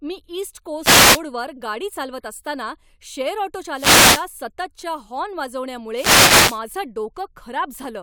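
At 0.81 to 1.21 s, 3.71 to 4.29 s and 5.91 to 6.63 s, wireless microphone noise hits appear: the FM link fades, and receiver static swishes over the speech.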